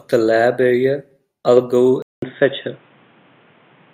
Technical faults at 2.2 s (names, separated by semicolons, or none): input switched to a poorer device